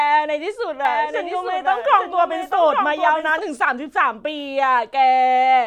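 Speech with a doubled audio track from 0.85 to 3.39 s: a full-band copy about 5 dB quieter trails roughly a second behind, likely from a second, slower capture path, showing on a spectrogram as repeated, offset speech patterns that start and stop abruptly.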